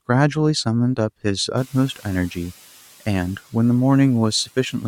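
At about 1.5 s the room noise rises sharply, by about 21 dB. From 1.57 to 2.48 s the noise suppressor is catching up. Its noise estimate lags the new level, so the noise first passes with less reduction, then sinks by about 4 dB over 0.91 s as the estimate adapts.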